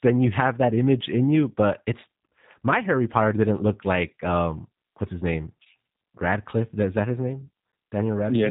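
Across the whole recording the speech passes through a G.729 codec, with plainly audible damage. Nothing above 3.8 kHz survives, and the pulse-based excitation rebuilding each frame gives the voice a rough, slightly synthetic buzz, which fits an 8 kbit/s G.729A stream.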